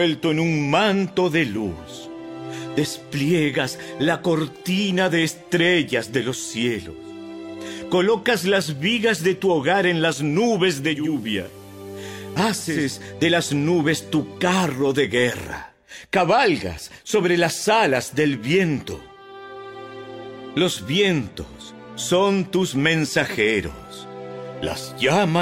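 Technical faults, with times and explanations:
10.82 to 12.95 s, digital radio blending to analogue: the receiver lost its digital stream and cross-faded over 388 ms to the station's FM signal, then back. Faint hiss rises, around 30 dB down, and level dips about 1 dB.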